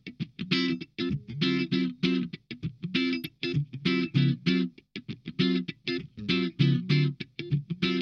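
A brief, faint blip at 3.24 s is a corrupt frame decoded: flipped bits in a couple of compressed frames were played anyway, scattering quiet energy at wrong frequencies.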